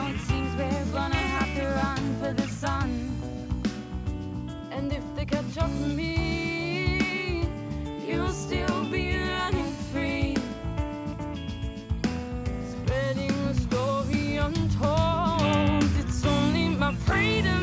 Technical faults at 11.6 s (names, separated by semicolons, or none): none